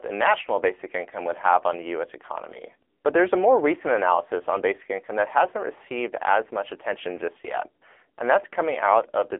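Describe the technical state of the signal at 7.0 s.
At 7.0 s the speech is still carrying the AMR narrowband mobile codec damage that runs through the whole clip. The band is confined to roughly 300 Hz to 3.5 kHz, with nothing above 3.6 kHz, so sibilants and breath lose their top end. The codec rebuilds the voice from a vocal-tract model excited by sparse pulses, and at this bitrate the result is plainly buzzy and synthetic, which fits the AMR-NB mode of 7.95 kbps.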